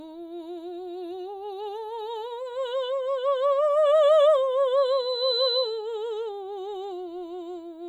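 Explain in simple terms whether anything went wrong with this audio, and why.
Loudspeaker feedback squeal, from 4.77 to 5.92 s: a microphone picked up the loudspeaker it was feeding, creating a loop. A piercing 4 kHz tone swells over about half a second until it is roughly as loud as the music.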